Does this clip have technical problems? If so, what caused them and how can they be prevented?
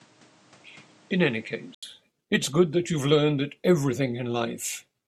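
Yes. For the first 1.83 s, the recording most likely ran through a poorer input device, and at 1.83 s the system switched to the better one. Over that opening stretch nothing reaches above 9.7 kHz, so the speech sounds dull and boxy. It also sits about 5 dB quieter, with a different noise floor about 30 dB under the signal. An 80 ms silence marks the switch, where the sound clears. To prevent this, lock the input device before recording and disable automatic device or headset-profile switching.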